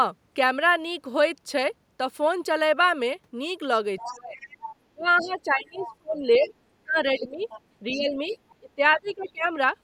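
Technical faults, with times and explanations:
3.97–5.91 s, 6.45–6.54 s, 7.39–8.38 s and 9.06–9.31 s, other side's voice leaking through: a second voice sits about 15 to 35 dB below the speech. This is likely echo the canceller failed to remove.
4.05–9.52 s, speech suppressed in double talk: the talker's voice dips, by up to about 25 dB, for roughly four seconds in total. This is likely the canceller ducking both sides while they overlap.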